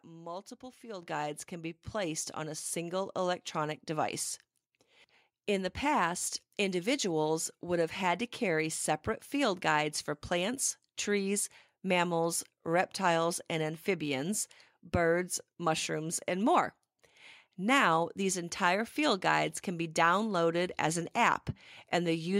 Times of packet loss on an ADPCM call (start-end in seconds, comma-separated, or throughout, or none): none